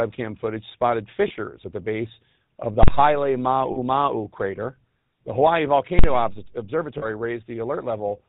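It's a speech clip that has been through the GSM full-rate codec the whole way, and the damage is plainly audible. Nothing comes through above 4 kHz, and there's a constant buzzy, gravelly roughness, which fits the 13 kbps full-rate coder. That coder models the vocal tract and drives it with a sparse train of regularly spaced pulses, keeping only every third excitation sample, so the fine texture of the sound turns to grit. On top of that there are lost GSM frames. At 1.28 s there's a brief 20 ms hold that points to a single dropped frame, and at 3.72 to 3.78 s and 6.98 to 7.05 s there are 40 ms stretches that fit two frames each. In each gap the decoder reused the last good frame's settings, so the sound freezes into a short, rough, metallic ring instead of cutting out. The nastiest problem is invalid numbers at full scale, at 2.83 to 2.88 s and 5.99 to 6.04 s. Some calculation produced infinite or invalid values that got clamped to the largest positive or negative value, holding the output flat at one extreme value far beyond the speech peaks for about 46 ms, which fits a 2048-sample processing block.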